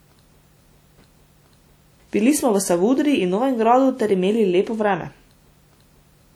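The speech carries plainly audible transform-codec damage from start to finish: a ringing, washy smear around each syllable and a hiss that swells and fades with the sound. This is likely WMA compression, with quantisation noise spread across long blocks and quieter spectral detail zeroed, which fits a bitrate near 48 kbps. Unlike a simple low-pass or band-limiting fault, the top end still reaches about 20.1 kHz, so the damage is the breathing noise and smearing, not missing treble.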